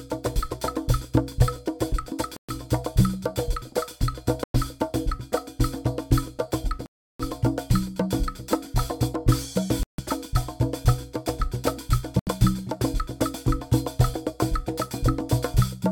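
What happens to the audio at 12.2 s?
At 12.19 s the sound cuts out for about 0.12 s, then resumes further along, most likely a Bluetooth dropout where late wireless packets got discarded.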